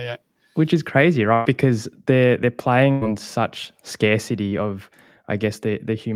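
At 1.33 to 1.47 s, right after "yeah which is crazy", a burst of packet loss drops about 120 ms. The receiver holds the last sound and fades it. The audio then resumes further on. The same happens at 2.91 to 3.03 s, after "they're they're", losing about 100 ms.

At 4.49 to 4.53 s comes a short concealed packet loss. About 20 ms never arrived in time. The receiver extended the preceding sound across the hole and blended back. It is heard as a brief smear.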